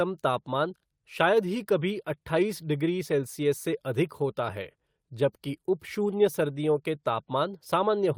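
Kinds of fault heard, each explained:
No technical faults are audible.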